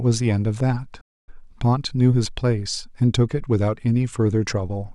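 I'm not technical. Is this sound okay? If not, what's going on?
No. There's a gap in the speech from about 1.01 to 1.29 seconds, likely a Bluetooth dropout: the wireless link to the headphones briefly failed to deliver a run of audio packets in time, so the headphones discarded them. You hear the speech cut out abruptly for roughly a quarter of a second. When it comes back, it picks up further along, so that stretch of speech is simply missing rather than delayed.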